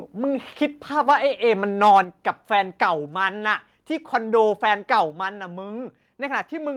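At 1.09 to 1.12 s and again at 1.83 to 2.0 s the loudest syllables take on a harsh, crackling edge. This is microphone overload. The input level was likely set too high, pushing peaks about 3 dB past the converter's ceiling, so their tops are flattened across a sizeable share of samples.

Just after, at 2.04 s, voice and background drop together in a single step of about 5 dB. At 5.1 s a second drop of about 3 dB follows. Both are likely the microphone volume being stepped down, the first in response to the preceding distorted peaks.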